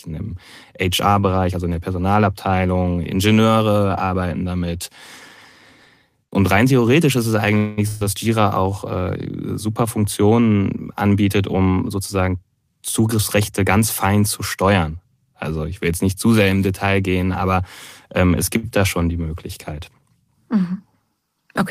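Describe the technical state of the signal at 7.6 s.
At 7.6 s the audio is in a call audio freeze from 7.57 to 7.79 s. The preceding sound is stretched into a fading buzz or hiss for about 200 ms, likely because delayed packets emptied the jitter buffer. Nothing is lost, and the speech resumes late. A spectrogram shows a smeared, flat band that decays, and the waveform shows a repetitive, shrinking envelope.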